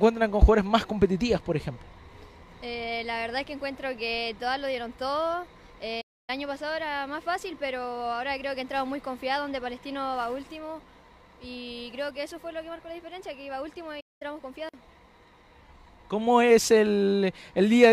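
At 6.01 s the sound cuts to silence mid-flow for about 270 ms, resuming at 6.30 s; at 14.00 s a second gap of about 200 ms follows, ending at 14.22 s. Both are playback stalls: the output goes dead abruptly rather than fading, then picks up again. The likely cause is the player briefly running out of buffered data or having its output thread blocked, leaving nothing to send to the device until it recovered.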